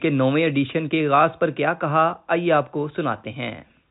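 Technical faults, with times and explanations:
Nothing stood out on listening to this speech, which comes through as telephone audio with no content above about 3.8 kHz.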